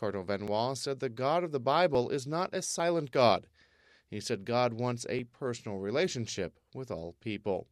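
Small forward jumps at 0.48, 1.95, 2.8 and 5.19 s, likely dropped buffers (overrun), each losing about 10 ms (40 ms at 2.8 s), visible as abrupt waveform discontinuities.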